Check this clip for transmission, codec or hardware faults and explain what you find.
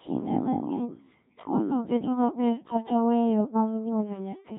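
One codec fault runs through the whole clip. Codec 2 vocoder, throughout: the speech is rebuilt from pitch, voicing and envelope with sine waves, fitting roughly 1.3 kbit/s, so it sounds heavily robotic and buzzy.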